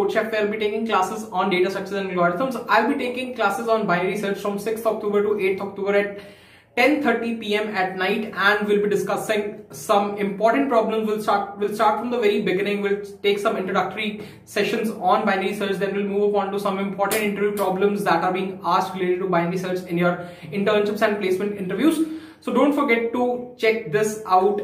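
No technical faults can be heard at any point in the audio.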